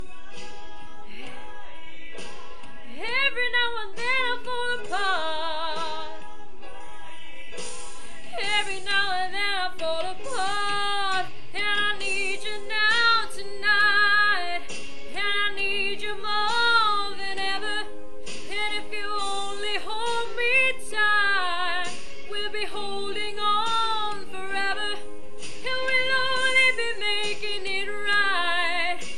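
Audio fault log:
0.0–6.8 s, de-emphasis applied wrongly: a treble-cut curve was applied to audio that carried no pre-emphasis to undo, or was applied twice, so the response rolls off smoothly toward the top, about 8 dB down at 10 kHz relative to 1 kHz, leaving the sound dull and muffled.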